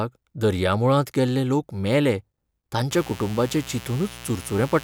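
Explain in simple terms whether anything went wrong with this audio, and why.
Mains buzz comes in at 2.91 s and continues to the end of the speech clip, sitting beneath it. Something connected to the recording chain, such as a light dimmer, a power rectifier or a poorly shielded cable, let sharp electrical spikes from the 60 Hz wall supply leak into the signal twice per cycle. Those spikes carry a whole ladder of tones up into the kilohertz range, which is why it sounds like a steady, raspy buzz rather than a soft hum.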